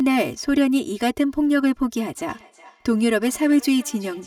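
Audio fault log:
throughout: channel delay (comb filtering). One channel runs late by about 3 ms, and the two are summed to mono. Whatever both channels share cancels at evenly spaced frequencies. The first notch sits around 150 Hz. Further notches follow roughly every 330 Hz up the spectrum. These notches never move. That fixed pattern gives the speech its hollow, phasey colour from start to finish.
2.13 s to 4.27 s: feedback echo between two devices. From 2.13 s to the end, the speech comes back roughly 0.4 s later. It sounds like a second device in the same room playing the call aloud. Its microphone then picks that sound up again. Each echo canceller only removes what its own device plays, so the loop survives. The returns peak at about 26 dB below the speech and sound thin and ringing.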